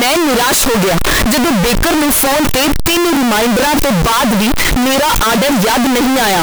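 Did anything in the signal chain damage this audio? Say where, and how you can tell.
Yes: float read as integer throughout, at sample-format conversion, likely 32-bit float decoded as 32-bit integer. The waveform is nearly square at an almost fixed, high level, with noise as loud as speech.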